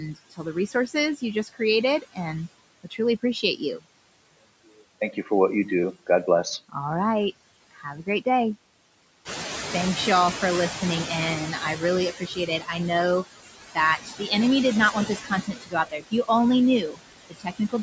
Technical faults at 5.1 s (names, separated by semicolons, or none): noise suppressor artifacts; speech cut by the noise suppressor